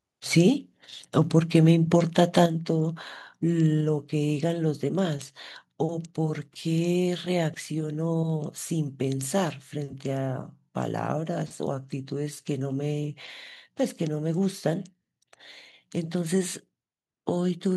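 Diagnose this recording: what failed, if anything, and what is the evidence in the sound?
At 2.46 s the whole signal, speech and background alike, drops by about 6 dB in a single step and stays at the new level. The likely cause is a microphone volume stepped down by the call processing stage, which lowered the device's input gain once rather than compressing the signal. A compressor or AGC would ride the level in gradual ramps and recover. Here there is one instant step and no recovery.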